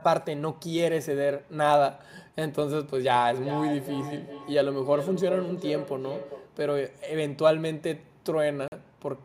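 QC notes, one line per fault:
3.3–6.61 s, feedback echo between two devices: the speech comes back at a steady interval of about 0.4 s, the loudest repeat about 9 dB below the direct sound. A second device's speaker is feeding this microphone, and its echo canceller only removes its own playback.
8.68–8.72 s, Bluetooth stall: the audio drops to silence for 42 ms, then continues. This is likely a Bluetooth stall, where interference delayed packets, the headphone buffer emptied, and playback paused until the resent data arrived.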